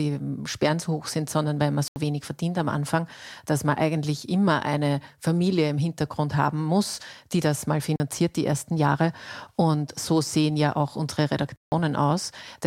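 At 1.88 s the speech drops out for 80 ms, again at 7.96 s for 40 ms, then at 11.56 s for 160 ms. Each is a block of digital silence: samples replaced by zeros with hard edges, so the sound cuts out and back with no fade and you get a short hole.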